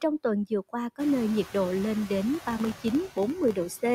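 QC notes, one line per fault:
Throughout, noise suppressor artifacts: the suppressor pulls steady-noise bands down by about 11 dB frame by frame, so room noise, louder from around 1 s, dips between words and swells beneath them.
2.35–3.95 s, filter restarted on every block: after "nhiệt độ lên đến", the filter resets each block and starts with a transient, giving a 43.1 Hz buzz that fits a 1024-sample block.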